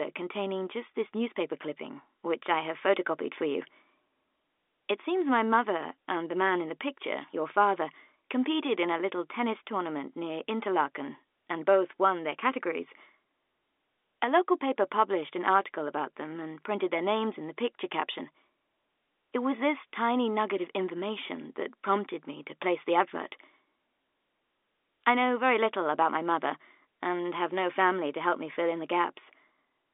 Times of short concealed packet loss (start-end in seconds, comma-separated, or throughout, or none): none